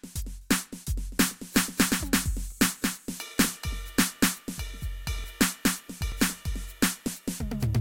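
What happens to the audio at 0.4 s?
Nothing goes wrong at 0.4 s: the music plays through that moment intact, with no dropout, click or other fault.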